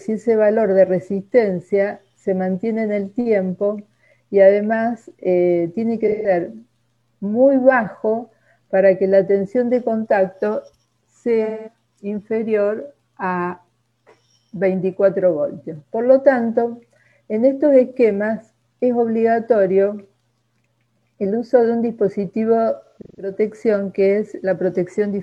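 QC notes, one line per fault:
6.07–6.31 s, 11.44–11.73 s, 22.84–23.33 s: AAC frame loss with concealment. The decoder rebuilds about 0.17 s and 0.21 s of missing frames from the last good spectrum, giving smeared, noisy patches. The third is scattered gaps totalling 0.3 s, longest run about 150 ms.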